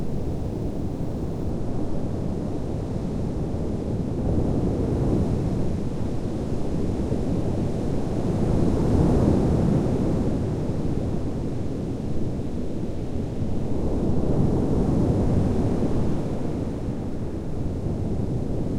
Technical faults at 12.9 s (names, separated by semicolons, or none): none